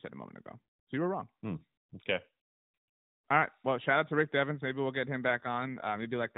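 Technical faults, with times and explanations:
5.28–6.38 s, AMR rate drop: right after "we'll get him" the speech turns rougher and buzzier, which fits the AMR-NB codec falling to about 5.9 kbps. The spectrogram shows no gap and the same 4 kHz ceiling, but harmonics look smeared and coarser.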